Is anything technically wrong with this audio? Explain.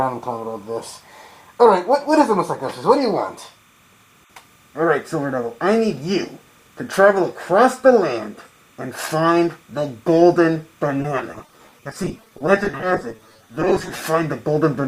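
Yes, there are two faults.

Timecode bleed runs through the whole clip. Linear timecode from a nearby track or cable has leaked into the audio path. At 30 frames per second, the code flips between tones near 1 kHz and 2 kHz as its bits change. It sits low, roughly 40 dB under the sound. You hear it as a thin, steady chirping warble in the background.

Repeated packet loss (robotic sound) runs from 10.98 s to 14.00 s. Over these three seconds the stream drops out again and again. Dozens of short holes appear, none longer than 20 ms, which suggests packets of about that length. Each hole is filled by stretching out the sound just before it. About 29 percent of the stretch is patched this way, close to 0.9 s in total. The result is choppy, robotic sound with pieces missing.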